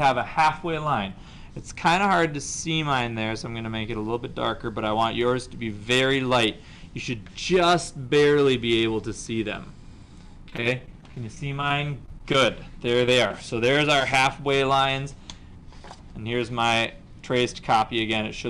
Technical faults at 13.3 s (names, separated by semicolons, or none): short concealed packet loss